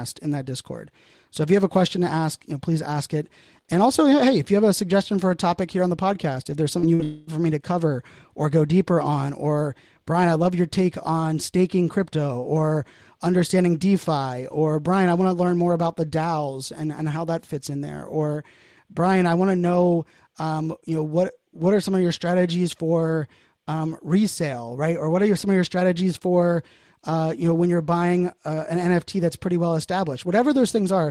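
Just after "the podcast if there's", short concealed packet loss hits at 6.79 to 6.86 s and again at 6.95 to 7.02 s. About 40 ms went missing each time. The gaps were patched from the preceding sound, leaving brief smears.

From 7.03 to 7.30 s, about 240 ms is replaced by a fading buzz or hiss continuing the last sound, with no silence, likely a long network dropout. Normal audio resumes at "for me to cover".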